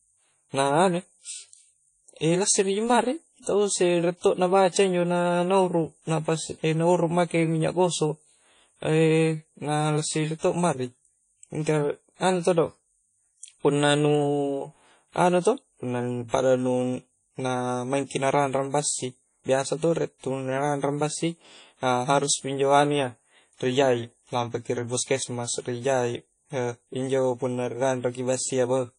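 Throughout the speech, WMA compression is the likely cause of a ringing, washy quality with hiss that swells and fades alongside the sound, which fits a bitrate around 32 kbps. A spectrogram shows nothing above 10.1 kHz, with patchy, smeared gaps where weak components vanish.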